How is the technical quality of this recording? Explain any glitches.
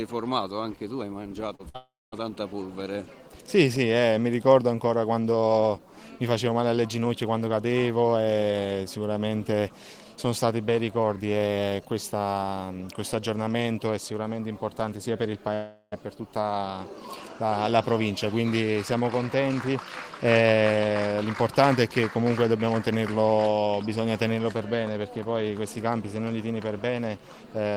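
The recording has several network glitches: a cluster of breaks in the first two seconds and another near the middle.

At 1.55 to 1.61 s there is a brief smear where about 40 ms of sound is bridged over. This is short concealed packet loss. Audio arrived too late, so the receiver extended the preceding sound for roughly 36 ms and blended back into the real signal.

At 1.69 to 1.76 s a held, fading tail replaces the sound, and the audio then picks up further along. This is a burst of packet loss. About 60 ms went missing, and the receiver covered roughly 51 ms of it by repeating the last sound as it decayed.

At 1.76 to 2.14 s and again at 15.54 to 15.94 s, the sound stretches into a fading buzz or hiss, and the audio then resumes with roughly 0.36 to 0.38 s gone. In the first of these, about 0.21 s of that is plain silence. In the second, the concealment runs nearly to the end of the gap. 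This is likely a long network dropout, where nothing reached the receiver for that stretch.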